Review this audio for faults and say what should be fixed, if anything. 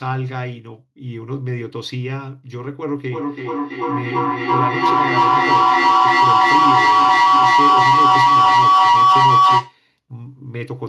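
Feedback howl from 3.11 s to 9.8 s: a microphone-to-loudspeaker loop gains level each pass, narrowing to a tone near 1 kHz, pulsing roughly every third of a second, peaking about 12 dB above the speech. A spectrogram shows a bright horizontal line; the waveform swells. Muting one device breaks the loop.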